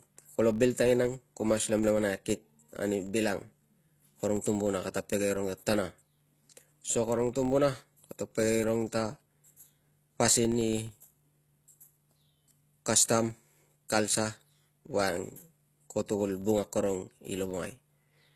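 From the start, the speech carries damage that is likely from HE-AAC compression at a low bitrate, near 16 kbps. The upper range is rebuilt from copied lower bands, so s sounds turn gritty and metallic.

Throughout the clip there is also a filter restarted on every block. Each block begins from silence, which leaves a small click at its start. These clicks merge into a buzz at 43.1 Hz, which fits a 1024-sample block. The buzz rises and falls with the level of the speech.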